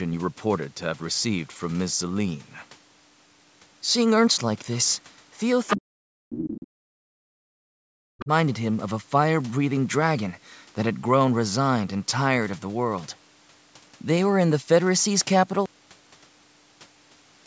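From 5.67 to 5.76 s a brief burst of the other side's voice leaking through is heard, nearly as loud as the talker's speech. The likely cause is the far end playing on a loudspeaker and reaching the microphone without the echo canceller removing all of it. Quieter scraps of the same leak follow from 6.32 to 6.64 s and faintly from 8.20 to 8.24 s.

From 5.76 to 8.31 s the talker's speech is suppressed in double talk. It dips and drops out in pieces, at its worst falling to near silence. The likely cause is the echo canceller being unable to separate local speech from the overlapping far-end echo and attenuating both.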